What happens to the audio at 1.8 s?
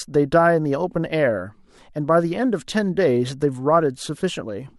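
Nothing goes wrong at 1.8 s; the speech there plays through intact, with no dropout, glitch or distortion.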